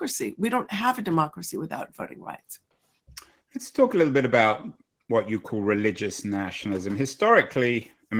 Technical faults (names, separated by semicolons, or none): Opus voice compression